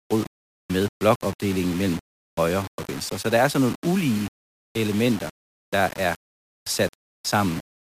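From start to finish, the speech carries a grainy, rasping distortion. It is heard as low bit depth without dither. The grit follows the voice and changes shape with every syllable. Quiet passages sound the worst. The softest moments sputter or drop out between steps. The likely cause is rounding to only 5 bits with no dither. The rounding error tracks the signal and sits roughly 20 dB below the speech.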